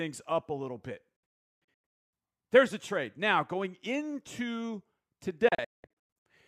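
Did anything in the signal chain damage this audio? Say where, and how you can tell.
Yes. Digital broadcast dropout at the reception stage: after "up a little bit", from 1.16 to 2.13 s, speech mutes in several holes with 3 ms fades, longest 352 ms; again 5.48 to 6.26 s, longest 192 ms. Unlike network loss concealment, the receiver leaves true silence.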